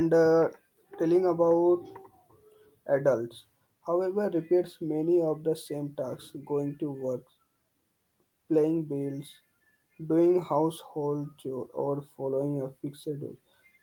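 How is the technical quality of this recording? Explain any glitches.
There are no glitches or technical faults to report.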